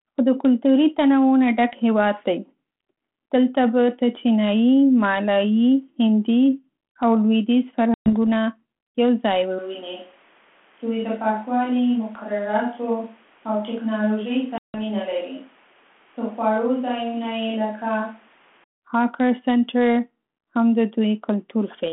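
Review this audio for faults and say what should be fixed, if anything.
Packet loss on an ADPCM call shows up twice: a hard-edged silent hole from 7.94 to 8.10 s, and another from 14.58 to 14.81 s, with roughly 120 ms and 160 ms of audio missing. Because this line runs G.726 ADPCM at 32 kbit/s, the receiver's adaptive predictor and step size drift away from the sender's while packets are missing. Speech comes back slightly distorted and then settles. Jitter buffering with proper loss concealment, plus a steadier network path, would prevent it.

From 9.59 to 18.64 s the sound suddenly turns roomy and hollow, drops by about 5 dB and loses bass. Background noise also rises to roughly 30 dB below the speech, and the change back is just as abrupt. The likely cause is a switch to a distant microphone after the close one dropped out. Checking the close mic's connection and monitoring it during the take would prevent this.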